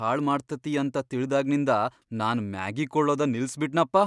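Nothing in the speech stood out as a technical fault when listening through it.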